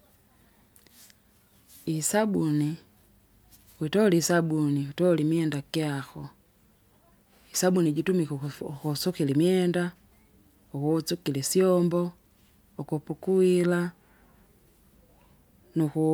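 A speech recording, and nothing is technically wrong with it.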